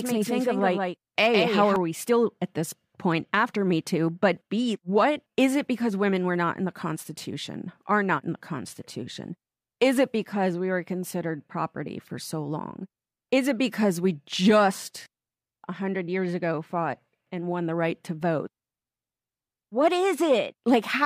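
From the start to 1.76 s, before "we still at this", a doubled audio track plays. A dry copy trails roughly 150 ms behind, about 5 dB quieter, then cuts off abruptly, likely from a second capture path.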